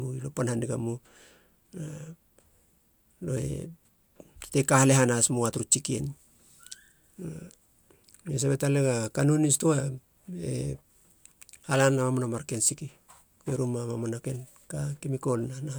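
Nothing in this recording of speech stood out as a technical fault on listening.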